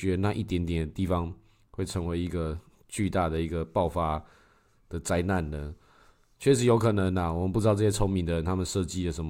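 No technical faults can be heard anywhere in this speech recording. There is nothing to place on a timeline or trace back to a cause.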